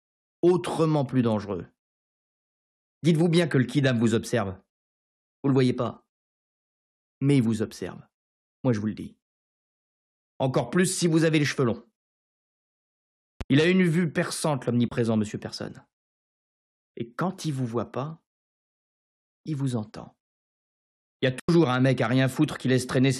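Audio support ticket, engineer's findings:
Loud pop, 13.41–13.43 s: single sharp pop, peaking a few dB above the surrounding sound, which carries on underneath. Likely a voltage transient from a plug, switch or driver glitch, added to the signal. Distinguished from a dropout: energy added, nothing removed.

Bluetooth dropout, 14.88–14.92 s (29 ms) and 21.40–21.49 s (87 ms): silent holes, sound resuming further along as if it had kept playing. Likely late packets discarded at the headphones, gaps fitting about two and six packets. Unlike a pop, audio goes missing.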